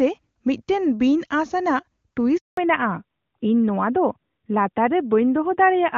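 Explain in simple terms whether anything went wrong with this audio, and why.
A handover gap hits at 2.37 s: the speech cuts out completely for 200 ms, until 2.57 s. This happens when a phone call is passed from one network link to another and, for that brief moment, no pieces of the voice signal get through. The sound fades away almost instantly and stays silent until the new connection picks up, so whatever was said during that fifth of a second is simply missing.

A fallback to narrowband follows right after, from 2.57 s to the end. Before the switch, the call was carried in HD Voice (the AMR wideband codec), and it sounds clear. Once the new link takes over, the call drops to an older, lower-quality phone codec that can't carry anything above 4 kHz. From that point on, the crisp upper detail of the speech disappears, leaving it duller, more muffled and rougher.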